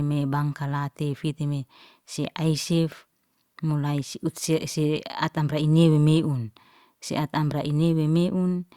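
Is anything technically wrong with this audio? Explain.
No, nothing stood out as technically wrong on listening to this speech recording.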